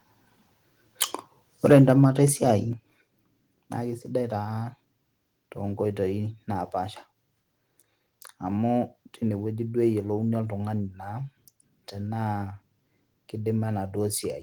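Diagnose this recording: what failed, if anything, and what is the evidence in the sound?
Microphone overload at the converter stage, from 1.66 to 2.05 s: the loudest syllables take on a harsh, crackling edge, with a few percent of samples flattened at the converter's limit, about 3 dB over. The likely cause is analogue input gain set too high, so peaks hit the converter's ceiling. Unlike codec distortion, the damage is confined to the peaks.

Microphone volume stepped down in call processing, at 1.73 s (about 3 dB) and again at 2.73 s (about 6 dB): voice and background drop together, instantly, and stay lower. The likely cause is the call software lowering the device's input volume after detecting clipping. A compressor would pump and recover.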